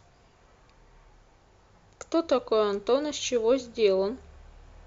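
A short speech recording with no technical faults to report: level, continuity and timing all hold steady across the whole clip.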